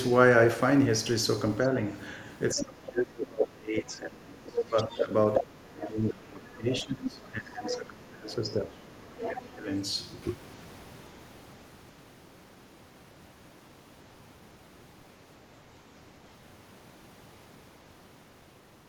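An echo canceller that likely failed to cancel the loudspeaker path lets the other side's voice leak through: a faint scrap at 1.63–1.68 s, then a louder stretch at 4.56–5.05 s, nearly matching the talker, and a brief burst at 5.35–5.40 s about as loud as the speech itself.

When both sides talk at once, the canceller likely cannot tell its own talker from the echo and turns everything down. This speech suppression in double talk hits 2.54–5.11 s, 5.41–6.66 s and 6.82–9.67 s, dipping the voice by up to around 20 to 25 dB in pieces.

Within that last span, the other side leaks through again, well below the speech, at 7.67–7.77 s and 9.17–9.50 s.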